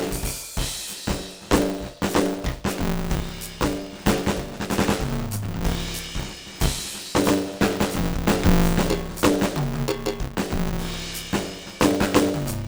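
Music, with buffer tearing from start to end. A steady robotic buzz sits on the music at 100 Hz. That rate points to a playback buffer period of 10 ms. The program filling the ring buffer and the hardware reading it have drifted out of step. They cross inside every period. A bit under half of each buffer plays audio about 20 ms old. Hard joins on either side of that stale stretch create the rattle.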